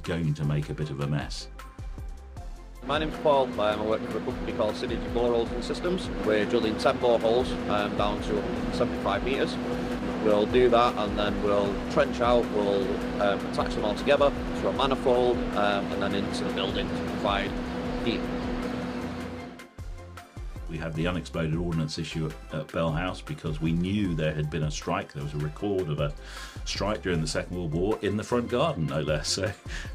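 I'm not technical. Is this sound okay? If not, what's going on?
Yes, nothing wrong can be heard in this sound.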